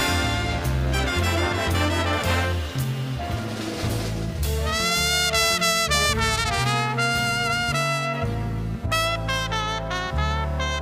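A buzzing, chirping layer of computer activity noise runs under the sound for the whole clip, pulsing at around 200 times a second and sitting roughly 30 dB below the signal. Shifting load from the processor, graphics card or mouse disturbs the ground shared with the audio circuit. Unlike steady mains hum, this buzz flickers and changes texture with the computer's activity rather than holding constant, and it ignores what the sound itself is doing.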